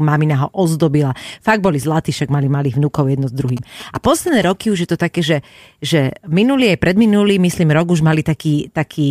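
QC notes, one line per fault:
3.49–4.51 s, GSM signalling bursts: a galloping run of short buzzes at about 217 Hz, roughly 20 dB below the speech. A nearby 2G phone was signalling, sending brief groups of radio bursts that the audio circuitry rectified into audible pulses.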